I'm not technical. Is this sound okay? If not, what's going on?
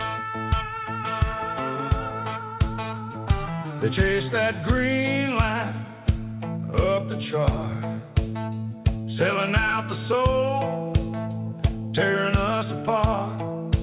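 Yes, no faults heard.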